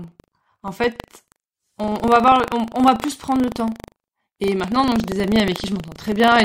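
Buffer tearing runs from start to finish. The program filling the ring buffer and the hardware reading it have drifted out of step. Their positions cross inside every period. A small slice of each buffer, a few percent, still holds audio from roughly 150 ms earlier, with hard joins on both sides. The result is a steady robotic buzz at 25 Hz, which fits a 40 ms period. It rides on the sound and drops away in silence.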